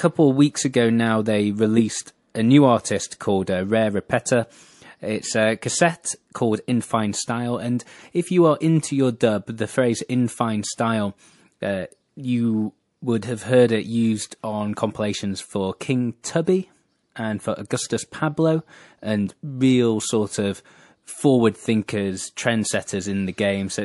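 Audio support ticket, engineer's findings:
Watery, swirly speech throughout, plainly audible. Likely MP3 compression, starved bits; sound fits roughly 48 kbps. Weak lines dropping in and out between frames.

Pre-echo, 16.45–16.47 s. Hiss about 11 dB up, spread 22 ms before a sharp attack. Codec noise smeared across the block; suggests long blocks, no short-block switching.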